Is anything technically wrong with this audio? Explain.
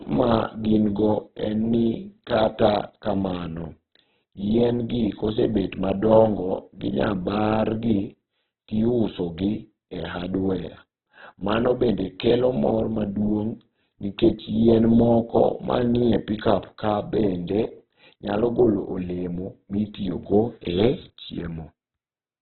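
Yes. Throughout the clip, the speech has most likely passed through heavy Opus compression, with the encoder starved of bits in its CELT music mode. With so few bits, each band keeps its overall energy, but its detail is filled with folded copies of lower bands or with noise, and the top of the spectrum is discarded. The result is narrowband, rough, grainy speech with nothing above 4.2 kHz, which fits a bitrate around 8 kbps.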